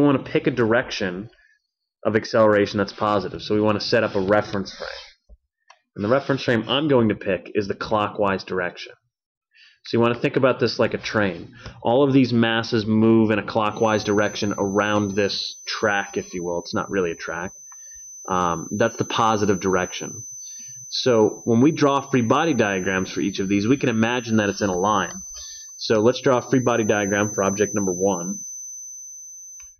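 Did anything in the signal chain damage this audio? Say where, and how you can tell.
Yes, there's a feedback whistle, a steady, slightly wavering 6.1 kHz tone, well under the main sound, from 13.66 s to the end. It's likely a speaker-to-mic loop sitting right at the edge of feedback.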